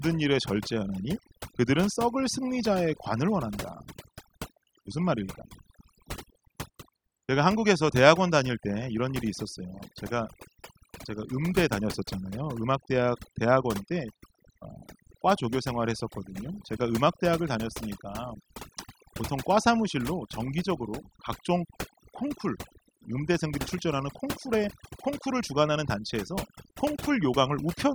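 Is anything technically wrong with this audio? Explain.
Yes. Throughout the speech, overdone noise removal is at work: a noise reduction stage set far too aggressively cuts any frequency band close to its noise estimate, taking quieter parts of the voice along. The background drops and breaks up into twinkling specks.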